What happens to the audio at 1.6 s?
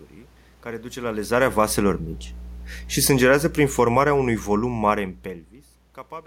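At 1.6 s, as throughout the clip, mains hum runs under the speech: a steady 60 Hz tone, perhaps 10 dB below the speech, coupled in from the power line. A spectrogram shows a flat horizontal line at 60 Hz, and the waveform carries a regular low-frequency ripple.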